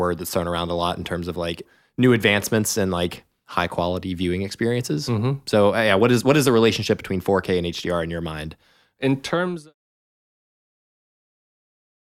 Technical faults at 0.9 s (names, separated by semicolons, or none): none